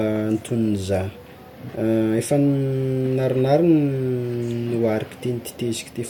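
No faults detected anywhere in the speech.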